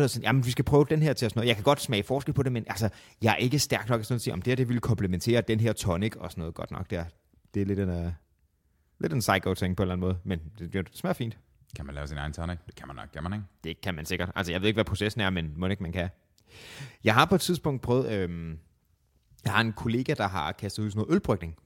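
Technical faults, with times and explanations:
No technical faults detected.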